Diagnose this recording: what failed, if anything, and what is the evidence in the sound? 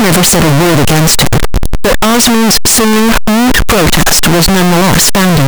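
Sample-format conversion likely mixed up signed and unsigned 8-bit samples, flipping the top bit, so the speech is harshly distorted throughout, with quiet stretches as loud as everything else.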